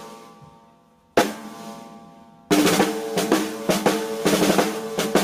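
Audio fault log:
Throughout, gain pumping: the level is pulled down on each loud sound, swinging around 20 dB, likely from excessive input gain with a fast limiter clamping down. Loud and soft parts end up closer in level, and the sound is squashed.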